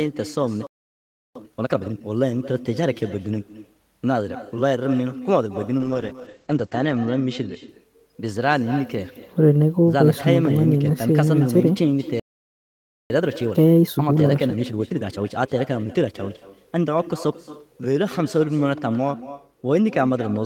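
Throughout the speech runs an echo with no canceller: the far end's loudspeaker output is picked up by its microphone and returned about a fifth of a second later, so every phrase is trailed by a thinner copy about 15 dB down.

At 0.67 s a playback stall cuts the speech to silence for 0.69 s, likely because the player ran out of buffered data. From 1.35 to 2.03 s a time-compressed catch-up plays the backlog at 2x speed with pitch held, so the speech sounds hurried.

From 5.80 to 7.75 s a call bitrate drop takes the encoder from 32 to 11 kbps for about 1.2 s at its lowest. Bandwidth narrows from 20 kHz to 8 kHz, and the speech turns muffled and watery before clearing.

A second playback stall silences the output from 12.20 to 13.10 s, about 0.9 s. A time-compressed catch-up follows from 13.10 to 16.10 s at 1.25x, rushed at normal pitch.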